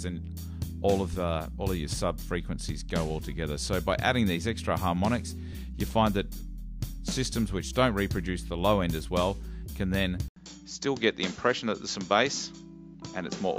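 At 10.28 s the sound drops out for 80 ms, then returns duller until the end, with nothing above 7.6 kHz and faint new background noise at similar loudness, likely an input switched to a poorer device. A spectrogram shows a brief blank column, then a flat ceiling, while the waveform's amplitude barely changes.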